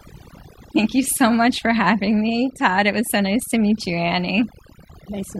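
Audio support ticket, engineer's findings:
Overdone noise removal, throughout the speech. The noise suppressor is set too aggressive: bands near its noise estimate are cut almost to nothing, taking quiet speech detail too. Near-silent background with twinkling specks. Unlike a gate, it cuts per band, not the whole signal.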